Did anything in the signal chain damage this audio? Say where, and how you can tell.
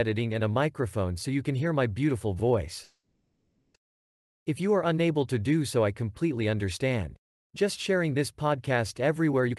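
Yes. Network stage, call audio freeze: from 2.83 to 3.76 s the sound decays into a buzz or hiss and near-silence, then resumes where it stopped, adding 910 ms of delay, likely from a jitter buffer running empty.

Jitter buffer speed-up: from 9.48 to 9.57 s the sound rushes at 187% speed with pitch unchanged, as the receiver trims about 70 ms of pitch periods to reduce the backlog.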